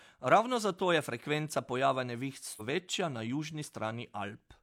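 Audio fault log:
2.56–2.62 s, stream segment skipped: the speech breaks off abruptly and resumes further along, with a brief discontinuity marking the join instead of a smooth pause. The cause is likely a segment of the stream that failed to arrive, so the player moved straight on to the next one. Whatever that missing segment held is gone, so the two sides of the join don't line up and the sound lurches forward at that point.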